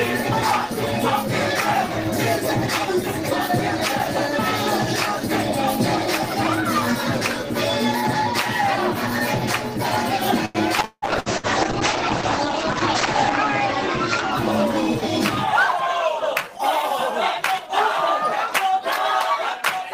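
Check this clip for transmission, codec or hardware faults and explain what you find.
Three transmission faults appear, all in the second half of the clip.

From 10.45 to 11.46 s, repeated packet loss (robotic sound) sets in. Four holes in the stream, the longest about 173 ms, were each patched by extending the preceding sound. Over a third of that second is filled-in audio, so the sound turns choppy, with pieces missing.

A call bitrate drop runs from 10.82 to 14.73 s. The sender's bandwidth estimate fell and the encoder was forced onto far fewer bits, which fits a fall from around 32 to 9 kbps. Coarser coding and a cut-off near 8 kHz leave the audio rough, watery and muffled for about 2.6 s.

Between 15.73 and 16.53 s, a jitter buffer speed-up occurs. Too much audio had built up, so the receiver trimmed small pitch-period slices repeatedly, roughly 50 ms in all. The sound runs about 6% fast at unchanged pitch and feels briefly hurried.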